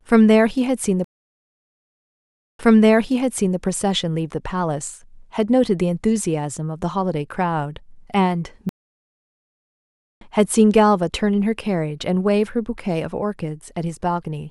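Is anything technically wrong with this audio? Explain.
Yes, the speech is interrupted twice by a stream reconnect. From 1.04 to 3.58 s the connection drops, leaving 1.55 s of silence. A fresh decoder then starts mid-stream and resumes 0.99 s earlier, so a stretch repeats. From 8.69 to 10.25 s there is 1.52 s of silence, and playback resumes roughly a second later, skipping material. On a waveform each gap is a flat line, and on a spectrogram it is a blank vertical band, followed by a soft fade-in as the first frames return.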